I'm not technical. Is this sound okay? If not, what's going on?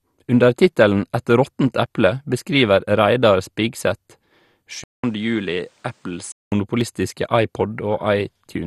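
No. The speech has three problems you can hear.

First, MP2 compression. The whole clip sounds dull and clearly gurgly or grainy. This is likely from saving it at a low-quality setting in the MP2 format. That format splits the sound into slices by pitch and drops the highest ones when it runs short of space. Nothing above about 12.2 kHz survives. The slices that remain are stored roughly, which gives that bubbling texture.

Second, audio missing between chunks. There are tiny skips at 1.86, 4.34 and 6.81 seconds. Each time, a very short bit of sound, a few hundredths of a second, simply vanishes, and the two sides are butted together. The skips come about every 2.5 seconds. That likely means the recording was handled in blocks, with a sliver lost at each handover.

Third, input switched to a poorer device. From 4.84 to 6.52 seconds the sound changes character. It starts with about 0.2 seconds of silence. 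Then it becomes duller, since nothing above about 10.3 kHz gets through. It is also a bit quieter and has a faint new background noise. This is likely the system swapping to a lesser microphone or headset for that stretch.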